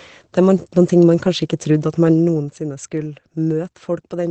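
Throughout the speech, Opus voice compression is plainly audible. The codec is running in its SILK linear-prediction mode at wideband, and nothing reaches above about 8.8 kHz, so sibilants and breath lack their top and the voice sounds muffled. The excitation is coded coarsely, giving a hoarse, slightly robotic grain on voiced sounds, which fits a low bitrate of around 12 kbps.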